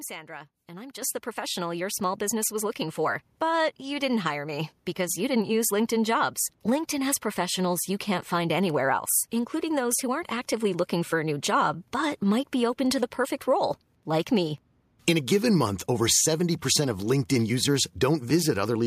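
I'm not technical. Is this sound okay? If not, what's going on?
No. The clip has a microphone volume stepped up problem. The loudness jumps suddenly three times: at 1.02 s, right after "and I'm", at 2.04 s, after "the professional your", and at 5.1 s, after "you didn't hire me". Each time, the call software judged the microphone too quiet and turned its input level up in one step. The voice and the background get louder together. The first jump is the biggest. The later two are small.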